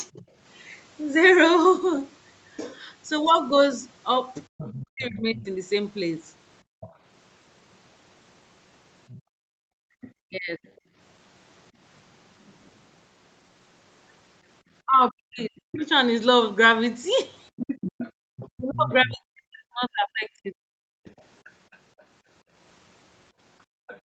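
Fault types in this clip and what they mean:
Speech suppressed in double talk: The speech dips sharply in four places, by roughly 25 to 40 dB. It happens briefly near 0.1 s, from 4.65 to 5.48 s, from 10.25 to 10.59 s, and in broken stretches between 14.84 and 20.55 s. That last stretch adds up to about three seconds. Each dip lines up with a second voice in the audio. The likely cause is an echo canceller that could not tell the two talkers apart and turned everything down.
Other side's voice leaking through: A second, fainter voice can be heard under the main speech. It is a brief trace near 0.2 s, about 30 dB down. It returns from 4.57 to 10.68 s, about 20 dB down. It is strongest from 15.74 s to the end, about 15 dB below the speech. This is likely loudspeaker sound reaching the microphone that the echo canceller failed to remove.
Background gated by the echo canceller: The room sound drops away while the far side is playing, then comes back. 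Between 6.63 and 10.95 s it cuts out in short gaps totalling about a second, at up to about 33 dB down. From 18.12 s to the end it is pulled down by up to about 35 dB. The canceller is clamping the microphone hard during playback, so the background vanishes along with the echo.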